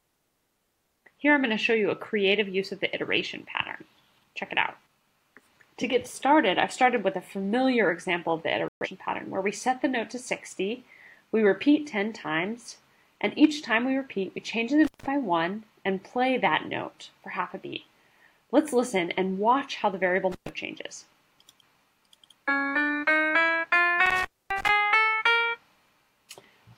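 At 8.68 to 8.87 s a digital broadcast dropout mutes the sound for about 128 ms, which fits roughly three lost frames. The receiver silenced output until valid frames resumed, so that stretch is gone. On a waveform it is a flat gap; a spectrogram shows a clean blank column.

An intermittent contact follows at 14.85 to 15.06 s, 20.32 to 20.49 s and 24.06 to 24.69 s, with the line open for about 164, 116 and 258 ms. A loose connection breaks briefly, cutting the sound with crackle at each edge and faint hiss between. Waveforms show spiky edges around a near-flat gap; spectrograms show vertical broadband streaks.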